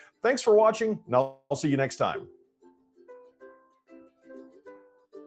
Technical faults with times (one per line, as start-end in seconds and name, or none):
0.00-5.26 noise suppressor applied to music or sounds
1.21-1.52 call audio freeze
2.32-4.29 sound cut by the noise suppressor